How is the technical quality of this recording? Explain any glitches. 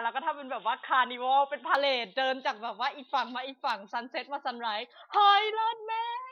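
The recording has one glitch, at the very start. From 0.0 to 1.75 s the input was likely switched to a poorer device, whose band stops at 3.8 kHz, so the speech sounds dull and boxy until the fuller sound returns without any gap.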